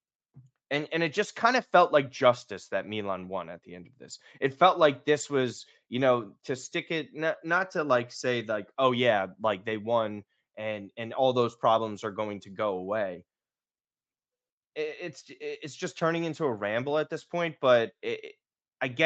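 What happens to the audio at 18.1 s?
Nothing goes wrong at 18.1 s: the speech continues intact through that moment, with only the normal band limit of the call path, nothing above 8 kHz.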